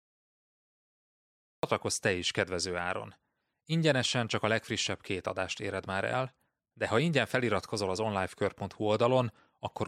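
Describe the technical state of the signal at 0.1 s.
At 0.1 s the signal is digital silence, part of a cut-off start running from 0.0 to 1.63 s. The capture began late, so at 1.63 s the speech enters abruptly in the middle of a sound, with no natural attack or fade-in.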